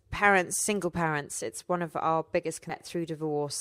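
Around 2.69 to 2.75 s the speech suddenly jumps forward with a short blip, and the flow breaks abruptly rather than pausing naturally. It sounds like a stream segment skipped, likely because one chunk of a segmented stream failed to load and the player simply carried on with the next one. So what you hear is a hard splice: the sound before and after doesn't line up, with that little click-like blip marking the seam.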